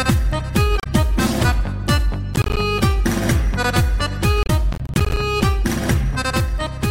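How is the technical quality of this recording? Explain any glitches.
The recording is marred by two kinds of glitch, each heard twice.

Damaged data in a compressed stream, at 0.80–0.86 s and 4.43–4.50 s: corrupted bytes make the decoder lose sync and hunt for the next frame, producing a brief glitch where frames are misread or dropped.

Processor overload crackle, at 2.34–2.57 s and 4.73–5.17 s: repeated missed deadlines leave short silent gaps, consistent with buffers of roughly 10 ms, heard as gritty tearing over the sound.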